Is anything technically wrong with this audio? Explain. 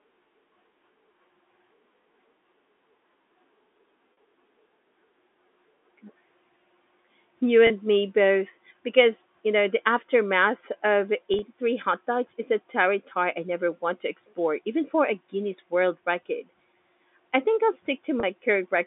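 Yes. There is packet loss with pitch repetition at 4.13–4.17 s, at 7.67–7.70 s just before "me both", at 11.34–11.42 s between "know the aftermath of" and "hot dogs is a", and at 18.20–18.23 s after "I think I'll". About 30 to 50 ms went missing each time. In the third event, 50 ms was scattered over 80 ms. The receiver filled each gap by repeating the last pitch period, which is heard as a brief held, buzzy tone in place of the lost sound.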